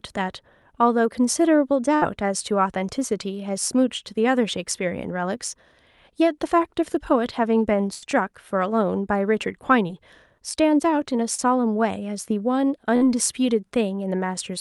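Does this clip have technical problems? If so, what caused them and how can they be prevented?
Yes. There are three bursts of packet loss, at 1.95–2.03 s, 7.93–8.07 s and 12.96–13.03 s. In each, the receiver stretched the last sound for 50 to 86 ms and faded it. Then the speech jumped ahead, with 40 to 80 ms missing. A steadier network path or a larger jitter buffer would prevent these gaps.

Short concealed packet loss occurs at 9.88–9.91 s and 11.35–11.40 s. Here the decoder bridged holes of 20 and 40 ms by extending the preceding sound, then blended back in. The result is a brief smear. Forward error correction would help recover such small losses.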